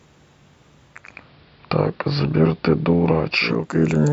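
From 0.84 s to 3.82 s the speech turns dull, with faint hiss: digital radio blending to analogue, a half-second cross-fade to the AM broadcast and back.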